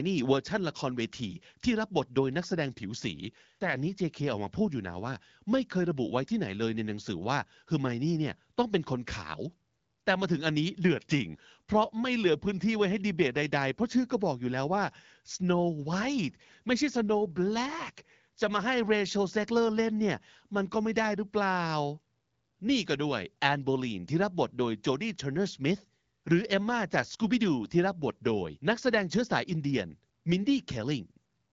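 No technical faults can be heard anywhere in the speech. It arrives through an AMR wideband (HD Voice) path at 12.65 kbit/s, so nothing sits above 7.5 kHz and the coding leaves only light traces on the sound.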